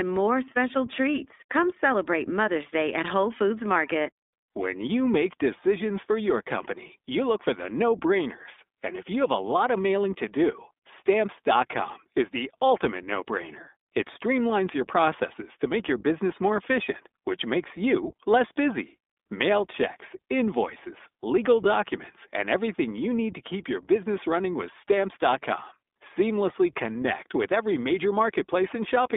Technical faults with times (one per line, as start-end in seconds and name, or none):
0.00-29.16 iLBC codec